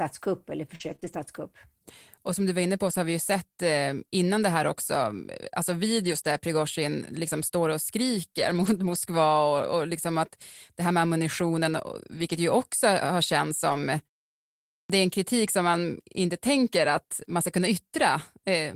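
Between 0.75 and 2.93 s the speech has brief ticks and small smears where about three scattered short gaps, none longer than about 40 ms, were patched. The receiver bridged each missing moment by stretching the last sound, which smears the sound without silencing it.

At 6.00 to 6.26 s, at 8.37 to 8.95 s just after "liksom står och", at 11.93 to 12.35 s between "det här med ammunitionen" and "ju också har känts", and at 13.69 to 13.76 s, the voice turns briefly rough and grainy. These are lost packets rebuilt from error correction. The following packets carried low-bitrate backup copies, so there are no gaps, but the rebuilt stretches (140, 300, 220 and 40 ms) play at coarser quality.

At 14.80 s, "det är en kritik" starts abruptly, missing its opening 95 ms. This is a clipped start after a pause. During the 0.8 s silence before it the output device dozed off, and it woke too late to play the onset.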